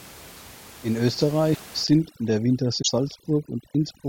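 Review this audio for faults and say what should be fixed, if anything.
Broken MP3 bit reservoir, at 1.53 to 1.61 s and again at 2.81 to 2.89 s. Each time the sound jumps ahead and about 83 ms comes out garbled, roughly three frames of 26.1 ms. The likely cause is that frames were lost from the stream, so the next frame reached back into the reservoir for data stored earlier and read bytes from a different frame. Prevent it by keeping every frame intact end to end, and by cutting or resyncing only at points where no frame depends on reservoir data.

Overdone noise removal, from 1.84 s to the end of the clip at about 4.09 s. The background drops and breaks up into twinkling specks. The room noise sits about 21 dB below the speech, but the reduction was set too strong for that. Individual frequency bands are switched off whenever they come close to the noise estimate, and the quieter parts of the speech are removed with them. 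Prevent it by lowering the reduction amount, or by skipping noise removal for noise this far below the speech.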